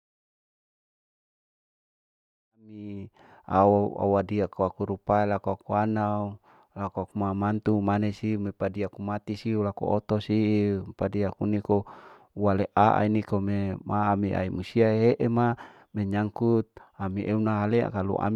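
Nothing here sounds wrong to my ear: the speech simply eases in with a gentle fade from about two and a half seconds up to 3.61 s, just as an editor would shape an opening, and there's nothing else to flag.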